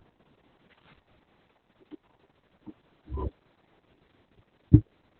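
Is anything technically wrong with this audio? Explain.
Yes. Throughout the speech there is heavy Opus voice compression in its SILK linear-prediction mode. The band is squeezed to narrowband, so almost nothing survives above about 4 kHz, and the excitation is coded very coarsely, which fits a bitrate around 6 kbps. The result is muffled, hoarse and faintly robotic speech. A simple low-pass filter would only dull the sound. This carries a rough, buzzy texture inside the remaining band too.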